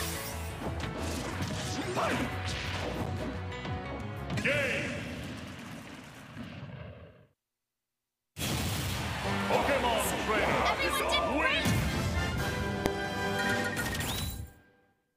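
At 12.86 s, invalid numbers at full scale produce a single sharp bang. A calculation failed for about 0.73 ms, pinning the waveform to one extreme value far beyond the audio's peaks over a broadband spectrogram stripe.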